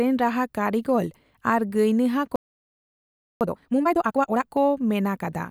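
At 2.36 s the player likely ran short of buffered data or had its output thread blocked, causing a playback stall. The speech cuts off in mid-flow and silence holds for about 1.05 s, until output resumes at 3.41 s.

From 3.41 s to 4.45 s the player works off the backlog the stall built up, dropping short slices and cross-fading across the joins. This time-compressed catch-up runs at 2x speed, so the speech sounds hurried yet keeps its normal pitch.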